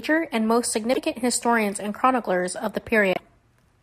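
At 0.93 s, just after "and most" and before "historians and chroniclers of", the speech skips ahead and about 50 ms comes out as a chirp, a burst of noise or a short hole. The same happens at 3.13 s, right after "historians and chroniclers of", for about 60 ms. Both are likely a broken MP3 bit reservoir. Frames were lost, and the following frames reached back for borrowed data that belonged to other frames. Each glitch spans two or three 24 ms frames.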